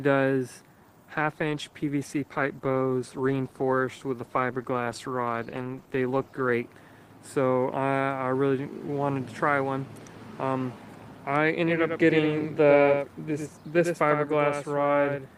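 From 1.11 s to 6.61 s there is a call bitrate drop: the encoder's rate falls from 48 to 15 kbps and stays at its lowest for about 5.4 s. Coding turns coarse and the top end is trimmed, so the sound goes rough and muffled. Unlike a dropout or packet loss, nothing goes missing.

From 11.66 s to the end there is a doubled audio track, likely from a second, slower capture path mixed in with the first. A full-band copy about 5 dB quieter trails by around a tenth of a second. It starts abruptly and has no decay or room colour, which marks it as a doubled track rather than echo or reverb.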